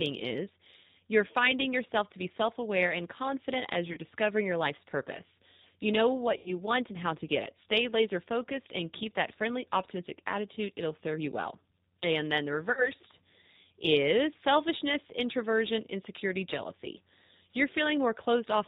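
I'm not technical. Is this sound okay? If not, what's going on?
No, not quite. The whole recording has passed through the G.729 codec, a phone-call compressor that rebuilds the speech from a simplified model of the voice. Everything sounds muffled, with the top end cut off, and a bit rough and synthetic throughout.

On top of that, there's VoIP packet loss concealed by the speech codec at about 3.93 to 3.99 s, 6.37 to 6.54 s and 12.72 to 12.91 s. Small chunks of the call went missing, roughly 40, 90 and 50 ms. The decoder filled each gap by stretching the last bit of sound into a brief buzzy or noisy, fading smear, and the speech stays weak or distorted for a moment after each one.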